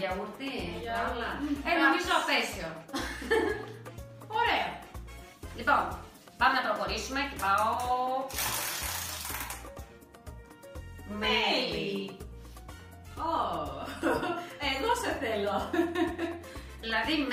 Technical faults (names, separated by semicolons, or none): none